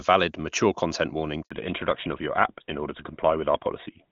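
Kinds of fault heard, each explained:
handover gap: The call was passed from one network to another, and no speech frames arrived while the link changed over. Right after "valid mature content warning", at 1.43 s, the sound fades out within a few tens of milliseconds. It stays silent for 80 ms, until 1.51 s. Then the new link picks up. Whatever was said inside that window is simply gone. It cannot be recovered from what remains.
fallback to narrowband: At 1.51 s, right as the new link starts, the call drops out of HD Voice into an older narrowband codec. Before this point the AMR-WB path sounds clean, with full wideband detail, which fits a high HD Voice rate. After it, nothing above 4 kHz remains, through to the end. The sound turns duller and rougher. That loss of top end points to a GSM full-rate codec.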